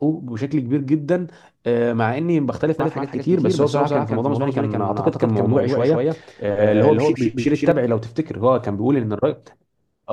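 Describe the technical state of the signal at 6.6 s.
At 6.6 s you're inside a doubled audio track that runs from about 2.80 s to 7.72 s. A second full-band copy of the speech trails the original by around 150 ms, sitting about 5 dB lower, so everything gets a dry, slapback-like echo with no decay or room colour to it. The copy switches on and off abruptly at those edges. Most likely the same signal is being picked up twice, once through a slower path.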